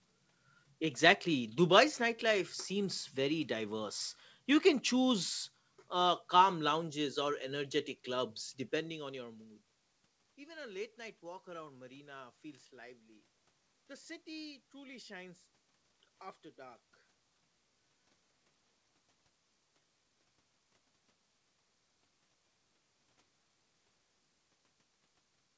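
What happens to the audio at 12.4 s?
Nothing goes wrong at 12.4 s; the audio there is intact, with no dropout, glitch or distortion.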